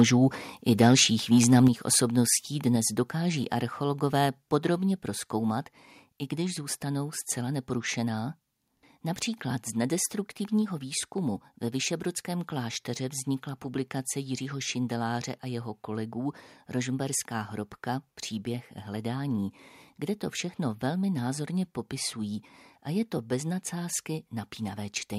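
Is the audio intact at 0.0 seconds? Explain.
No, it isn't. From 0.0 to 0.03 s there's microphone overload: the loudest speech peaks have their tops sheared flat, giving a brief harsh crackle. The likely cause is input gain set about 3 dB too hot, clipping roughly one in twenty samples there.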